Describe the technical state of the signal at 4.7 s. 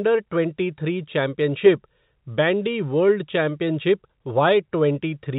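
At 4.7 s the speech is intact, with no dropout, click or distortion, only the narrow telephone band of G.711 coding, which passes nothing above 4 kHz.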